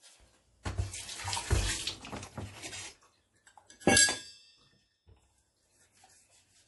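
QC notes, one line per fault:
throughout, MP3 compression: Nothing comes through above 11.5 kHz, so the top end stops at a hard ceiling. The damage is plainly audible. Quiet detail seems to flicker in and out, giving a watery, swirling texture. Sharp onsets sound smeared. This is likely a lossy MP3 encode with too few bits. The encoder drops the treble and zeroes weak frequency lines frame by frame. The sound points to a low bitrate, around 48 kbps.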